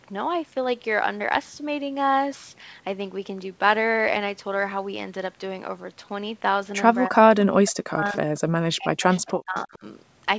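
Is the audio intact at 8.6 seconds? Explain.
No. From 8.38 to 9.84 s the speech dips and breaks up, falling about 40 dB at worst. This is likely speech suppressed in double talk by the echo canceller.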